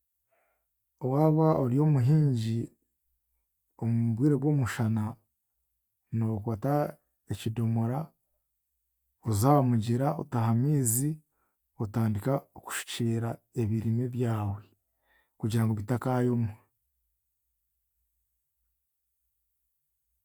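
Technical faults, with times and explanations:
No technical faults can be heard anywhere in this speech.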